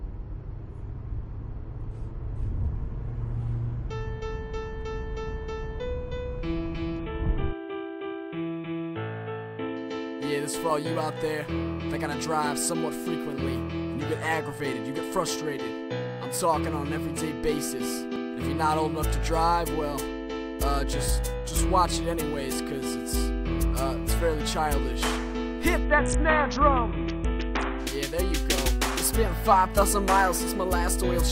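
From 6.99 to 9.77 s, and again from 25.85 to 27.80 s, the treble dulls and a gritty, grainy noise rises through the sound before clarity snaps back. Both are a Bluetooth SBC bit pool drop. When the wireless link became congested, the encoder cut its bit allowance to keep audio flowing. The sound fits a fall from a bit pool of 28 to 6, around 60 kbps. The highest sub-bands were starved, and the rest were quantised coarsely.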